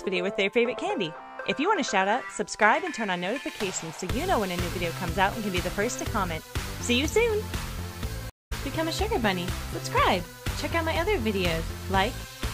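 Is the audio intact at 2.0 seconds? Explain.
Yes, the audio is intact at 2.0 seconds, with no dropout, click, distortion or other fault at that point.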